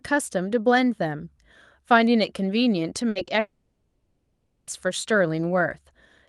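Speech carried over a call path whose band stops around 12 kHz, as an Opus call codec would give, breaks up in three places between 3.09 and 4.69 s. The first is a burst of packet loss from 3.09 to 3.17 s. About 60 ms of audio never arrives, and the receiver keeps extending the last sound and turning it down, so it turns into a short fading buzz or hiss before the speech picks up again with that 60 ms gone. Then, at 3.25 to 3.29 s, there is a short concealed packet loss. A 20 ms hole is patched by continuing the preceding sound and blending back into real audio, which is heard as a brief smear or wobble rather than a clean gap. The largest fault is a long network dropout from 3.39 to 4.69 s, likely caused by the connection delivering nothing for over a second. About 1.3 s of speech is lost. The concealment drags the last sound out as a decaying buzz or hiss across most of the gap, and roughly 130 ms of silence follows before the audio resumes further on.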